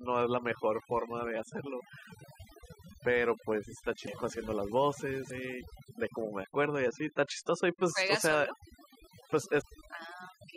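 From the start, overdone noise removal shapes the whole speech clip. A noise reduction stage set far too strong pulls individual frequency bands down or out whenever they sit near its noise estimate, so the gaps between phrases collapse into near silence dotted with twinkling specks, and the quieter components of the voice are stripped away with them. It differs from low-bitrate codec smearing because the artefacts follow the level of the noise floor rather than the complexity of the sound.

Over this, damaged data in a compressed stream breaks through at 1.77–1.81 s, 4.04–4.08 s, 5.27–5.31 s and 9.60–9.64 s. At each point, bytes in the encoded stream were wrong, so the decoder misread those frames, lost sync and hunted for the next valid header. Each event is a brief disturbance of roughly 40 ms.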